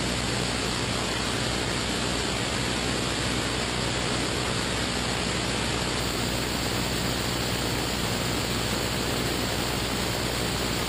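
An adaptive stream starting at a low bitrate leaves the opening thin, synthetic-topped and with stronger artefacts (nothing above 12.3 kHz, like a very low-rate HE-AAC stream) until the audio cleanly steps up at 6.0 s.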